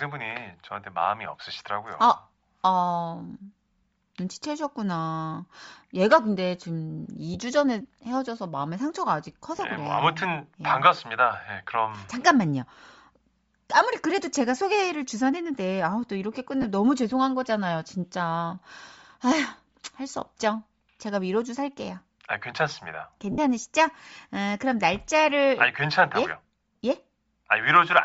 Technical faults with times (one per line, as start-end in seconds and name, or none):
0.00-28.05 Bluetooth LC3 compression
7.34-7.36 lost LE Audio frames
9.57-9.59 lost LE Audio frames
16.62-16.65 lost LE Audio frames
23.32-23.38 lost LE Audio frames